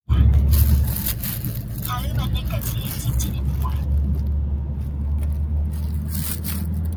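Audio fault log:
Throughout: noise suppressor applied to sounds. A speech-tuned suppressor treats steady tones, ambience and tails as noise. Onsets pass, but held parts and decays get pulled down by roughly 5 dB. The level pumps and flutters, and the sound thins out between attacks.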